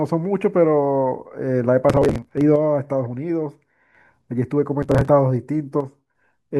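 From 1.90 to 2.41 s there's processor overload crackle. Around forty buffers of roughly 10 ms miss their deadline and get skipped, so the speech tears into a gritty crackle. Between 2.56 and 3.95 s the level falls abruptly by about 6 dB and then recovers, likely one channel dropping out before the mono sum. The crackle comes back from 4.82 to 5.08 s with around twenty skipped buffers this time, and the same 6 dB dip returns from 5.80 to 6.15 s.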